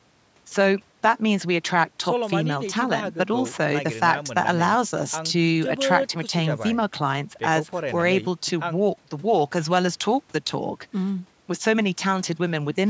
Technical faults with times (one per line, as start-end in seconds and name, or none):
none